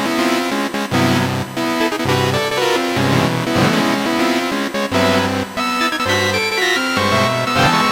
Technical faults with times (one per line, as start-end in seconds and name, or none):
0.00-7.92 USB whine